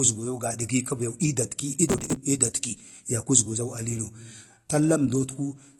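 From start to finish the speech sounds dull and smeared, with a watery, fizzy edge on sibilants and nothing above 12.1 kHz. This is plainly audible AAC compression, likely AAC-LC at a low rate, which fits around 32 kbps, discarding the top band and coarsely quantising what remains.

From 1.88 to 2.16 s a gritty, tearing crackle rides over the speech and then stops abruptly. This is processor overload crackle: dozens of very short buffers, each a few milliseconds long, missed their deadlines in a row and were skipped, leaving a rapid string of hard-edged gaps.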